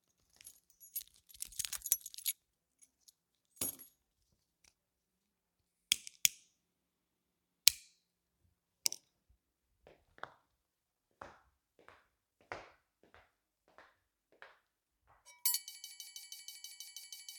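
At 15.75 s the audio locks into a broken-record loop: a fragment about 0.16 s long repeats exactly, back to back, ten times, running right through to the end of the clip. The result is a rapid, mechanical stutter in place of the sound that should have continued, and that material is simply lost. The likely cause is a stall in the player, encoder or stream, which kept resending the last piece of audio it still held.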